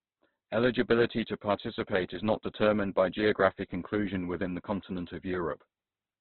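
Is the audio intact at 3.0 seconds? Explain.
No. At 3.0 seconds the speech is damaged, as it is across the whole clip. Nothing sounds above 4.4 kHz, so it is narrow and muffled, and the tone turns rough and grainy. This is likely heavy Opus compression, which fits a rate near 12 kbps.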